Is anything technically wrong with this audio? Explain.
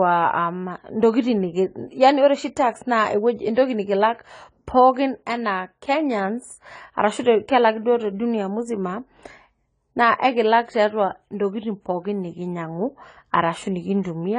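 Yes. Throughout the speech there is plainly audible AAC compression damage, likely from AAC-LC at a low bitrate, which fits about 24 kbps. The encoder starved high frequencies of bits, so nothing remains above 10 kHz and the sound is dull, with a swirling, fizzy smear on sibilants and held vowels. That metallic warble is what separates it from a simple low-pass filter, which would dull the top without adding artefacts.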